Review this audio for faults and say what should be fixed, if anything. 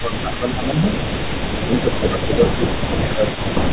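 An echo leak runs from 0.00 to 3.73 s: a delayed copy of the speech trails the direct sound by about 0.4 s at roughly 15 dB below it. The likely cause is a far-end loudspeaker whose echo canceller passed residual echo back. Better echo-canceller tuning or a headset at that end would prevent it.

Speech suppressed in double talk appears at 0.01–0.88 s and 1.65–3.55 s, with the talker's level dipping by around 10 dB across roughly 0.7 s and 1.5 s. This is likely an echo canceller turning down its own talker along with the loudspeaker echo while the sides overlap. A canceller with proper double-talk detection would prevent it.

The G.711 mu-law path, limited to 4 kHz, is audible as narrowband coloration with its usual coding noise.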